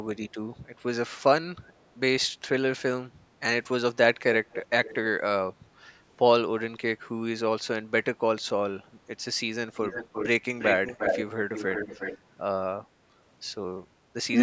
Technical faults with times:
4.52-4.95 echo leak
9.75-10.28 echo leak
10.59-11.25 echo leak
11.54-12.18 echo leak

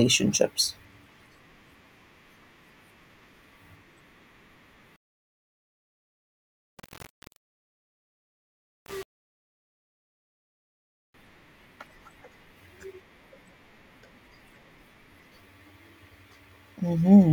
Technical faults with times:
4.96-11.14 low bit depth without dither

